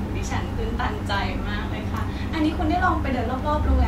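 At 1.94 s, compressed frames were skipped: the decoder never played a couple of consecutive frames, either because they were missing or because it rejected them as damaged. The speech jumps ahead by about 50 ms, which fits two frames of roughly 26 ms.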